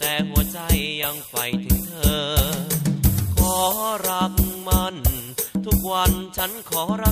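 No technical faults can be heard in this audio, so there is nothing to describe in time order.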